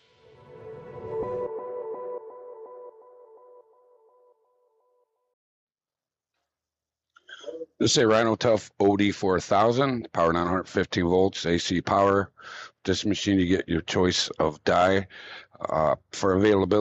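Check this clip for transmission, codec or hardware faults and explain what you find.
No transmission, codec or hardware faults are audible anywhere in the recording.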